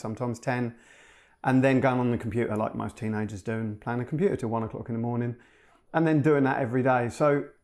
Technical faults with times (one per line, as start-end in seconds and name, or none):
4.41-7.44 de-emphasis applied wrongly